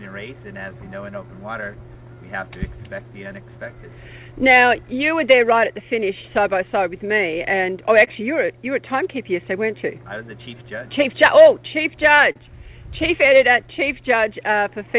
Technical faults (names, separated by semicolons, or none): clock drift between sender and receiver; repeated timing corrections; scattered short gaps; short stall from a late packet